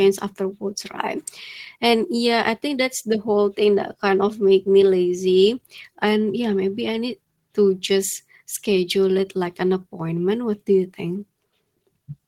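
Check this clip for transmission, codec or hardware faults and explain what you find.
Nothing in this speech recording points to a fault of any kind. The audio holds steady throughout, with no event that stands out for comment.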